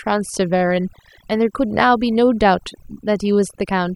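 From start to finish, a noise reduction stage has been pushed far too hard, a case of overdone noise removal. It pulls individual frequency bands down or shuts them off whenever they come close to its noise estimate, and the softer parts of the speech get caught along with the noise. The gaps between phrases sink to near silence dotted with twinkling specks.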